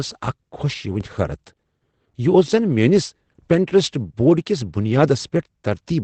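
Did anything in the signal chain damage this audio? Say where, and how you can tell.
Yes. The codec stage has damaged the whole clip with Opus voice compression. The speech has nothing above 8.5 kHz, so it sounds dull, with a hoarse, slightly robotic texture where the coarsely coded excitation stands in for the real voice. That narrow band and buzzy grain point to the SILK voice coder at a low rate, around 12 kbps. A plain low-pass filter would dull the sound without adding that synthetic, rough quality.

There is also a DC step at 1.01 s, most likely from the converter or analogue input stage. The waveform's zero line jumps there, heard as a single low thump or click, while the speech carries on undisturbed. The offset then sinks away as a 20 Hz high-pass further down the chain drains it. A dropout or digital click would interrupt or tick over the speech itself. This event only shifts the baseline under the sound.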